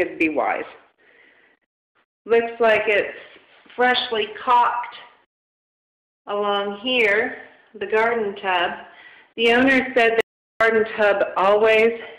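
An audio dropout to silence runs from 10.21 to 10.61 s: the sound cuts off mid-flow and about 0.4 s of silence follows, with no room tone, before it resumes. This likely came from the input being lost while the recorder kept writing silence.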